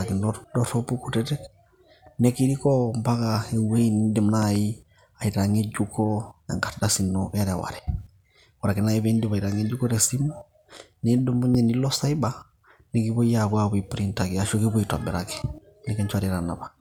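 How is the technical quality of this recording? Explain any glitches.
The recording has three loud pops breaking through the speech. Between 4.42 and 4.58 s there's a quick pair of them, peaking a few dB above the speech, and a single louder one from 11.55 to 11.57 s, roughly 10 dB over. Each is a loud pop, likely a sudden voltage step or pulse from a plug, switch, static discharge or driver glitch getting into the signal path. The following circuitry shapes that spike into a brief thump, and the speech carries on underneath.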